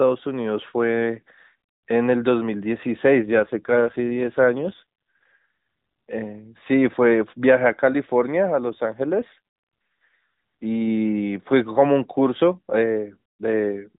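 From 3.23 to 6.10 s and 8.70 to 10.23 s, an AMR rate drop makes the speech buzzier and synthetic, fitting a 12.2 to 5.9 kbps fall. A spectrogram shows smeared harmonics, no gap, and the unchanged 4 kHz ceiling.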